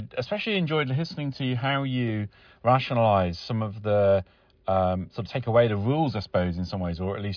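Nothing in this speech recording stands out as a technical problem; it runs from beginning to end without any glitch worth pointing to.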